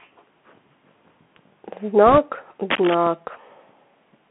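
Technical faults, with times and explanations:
Throughout: Bluetooth CVSD headset codec. The speech is squeezed into a telephone band of roughly 150 Hz to 3.4 kHz, which fits a 64 kbps CVSD stream. The one-bit delta modulator can't follow fast, loud high-frequency movement, so sibilants turn scratchy and a grainy hiss sits under the voice. Unlike general lowpass filtering, the damage is a textured, slope-limited roughness that tracks the signal, not just a dull top end.
2.06–2.18 s: bit errors on a Bluetooth voice link. For about 0.12 s a rushing, crackly noise runs through the speech, pointing to an error rate somewhere around 1.5 percent. Every CVSD bit carries the same small step and the decoder soon recovers from a wrong one, so flipped bits give a fizzy wash with no sharp pops. That sets it apart from packet loss or digital clicks, which produce gaps or loud discrete ticks.
2.70–2.95 s: cable scratch noise. 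A quarter-second burst of dense, irregular scratching and rustling lies over the sound, nearly as loud as the speech itself. Its likely cause is a worn cable, connector or control being moved, so that the contact resistance jumps about rapidly. The uneven, crunchy clustering distinguishes it from the smoother rushing of the bit errors just before and from a steady hiss.
3.07 s: DC step. The waveform's zero line jumps suddenly, giving a single low thump while the speech carries on unchanged. The offset then drains away through a high-pass near 5 Hz, so the thump settles within a fraction of a second, without a lasting hum. It differs from a click or dropout in being a soft, bass-heavy bump with no break in the sound.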